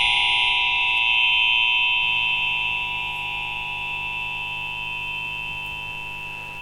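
At 1.99 s a mains buzz kicks in and hangs around right to the end of the clip. It's that steady, raspy 50 Hz drone, sitting roughly 20 dB under the sounds. What's going on is sharp switching spikes getting into the signal path twice per mains cycle, through something like a dimmer, a rectifier or a missing shield. That piles up harmonics of 50 Hz reaching into the kHz range, which is why it rasps rather than hums.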